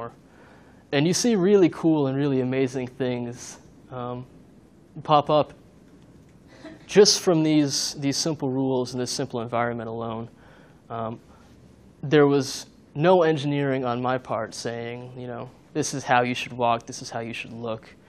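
No technical faults can be heard anywhere in the recording. There is nothing to point to at any moment in the audio.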